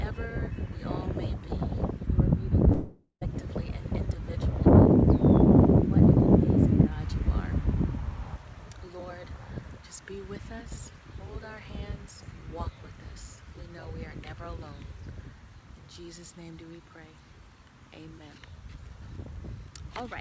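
Long network dropout, from 2.72 s to 3.23 s: the sound stops advancing and the last fragment is stretched into a buzzing, fading tail for roughly half a second, ending in a brief stretch of silence of about 120 ms. When the audio resumes, about 500 ms of material is simply gone. This is likely a loss of incoming audio, with the receiver's concealment extending the last sound until it gives up, heard through a call path with nothing above 8 kHz.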